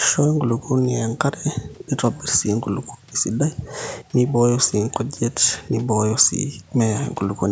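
No technical faults are audible.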